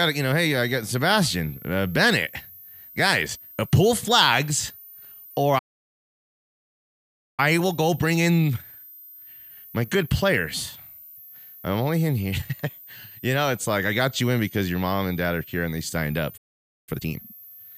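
Speech with a switching supply whistle present throughout: a thin high tone wandering between 13.3 and 13.9 kHz, roughly 25 dB below the speech, from a switching power supply in audible burst mode or beating with another. Two playback stalls cut the sound to silence, at 5.58 to 7.40 s (1.8 s) and 16.37 to 16.89 s (0.5 s), most likely because the player ran out of data. Each is followed by time-compressed catch-up, which keeps normal pitch but hurries the sound: 1.15 times speed from 7.40 to 10.40 s, then 2 times speed from 16.89 to 17.39 s.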